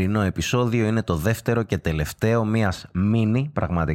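From 2.67 s to the end, just after "το δεύτερο και τελευταίο", the speech shows de-emphasis applied wrongly. A treble-cut stage meant to reverse pre-emphasis has acted on a signal that carried none, or has acted a second time, so the high end rolls off smoothly to about 11 dB down at 10 kHz relative to 1 kHz. Sibilants and consonant detail lose their edge, and the voice turns dull and muffled.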